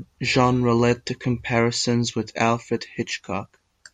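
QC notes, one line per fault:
No faults heard.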